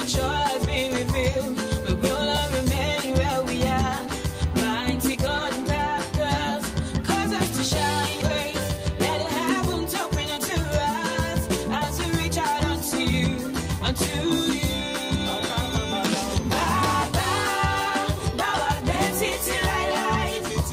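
At about 8.21 s there's a skip ahead: roughly 0.7 s of audio just vanishes, and playback lurches forward with no gap filling it. Later audio was already queued, so that chunk got dropped and the two sides are spliced almost directly together.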